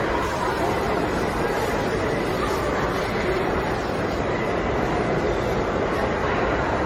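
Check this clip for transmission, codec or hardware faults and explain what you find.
One codec fault runs through the whole clip: generation loss, present from start to finish. The sound is swirly, smeared and hollow, transients are blurred, and nothing remains above 16.5 kHz. This is likely the result of about ten rounds of lossy AAC-LC decoding and re-encoding at rates that point to roughly 64 to 75 kbit/s. Each pass quantises again on a shifted frame grid, so noise and spectral gaps pile up beyond what one encode would leave.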